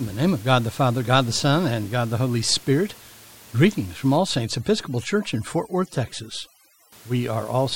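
From 4.17 to 6.92 s, overdone noise removal sets in: the room noise, about 24 dB below the speech, is gated into near silence with twinkling specks. Unlike low-bitrate codec warble, the specks appear only where background sits.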